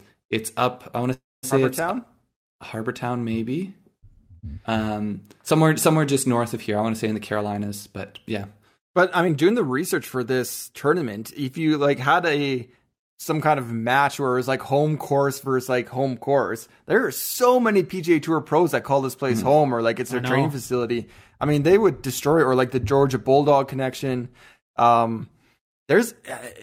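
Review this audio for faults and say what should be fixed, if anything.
A call audio freeze occurs at 1.13 to 1.45 s, just after "up I want to". The last sound hangs as a fading buzz, then goes silent, and resumes with nothing lost. Delayed packets likely emptied the jitter buffer.

Jitter buffer speed-up occurs at 7.14 to 7.98 s, after "want to say in", running 9% fast. It recurs at 8.42 to 11.39 s, before "you like had a", at 6% fast. Pitch stays the same while the audio sounds hurried. The buffer trimmed pitch-period slices to shed about a tenth, then a fifth, of a second of excess delay.

To fix this, stabilise network delivery so packets neither stall nor arrive in bursts.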